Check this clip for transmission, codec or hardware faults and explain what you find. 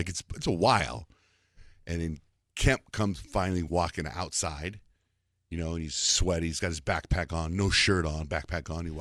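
No faults can be heard anywhere in this speech recording. There is nothing in it to point to or explain.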